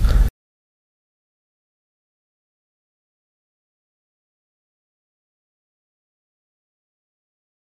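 Nothing stood out as a technical problem on listening to the clip.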